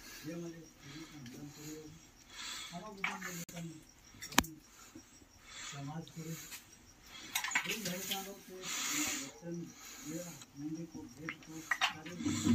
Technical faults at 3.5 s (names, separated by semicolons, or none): Bluetooth stall